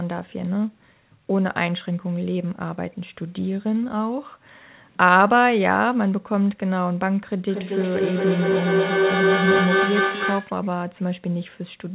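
At 7.5 s a feedback howl begins. Two devices share the call in one room, so each loop trip gains level. A shrill tone near 5 kHz builds, pulsing roughly every fifth of a second. It peaks about 11 dB above the speech and stops at 10.61 s.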